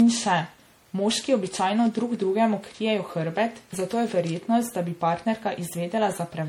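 Generation loss runs through the whole speech clip. The sound is swirly, smeared and hollow, with blurred attacks. This is likely from repeated MP3 re-encoding, about seven passes at what sounds like 64 kbit/s. Each pass stacks fresh quantisation noise and spectral holes.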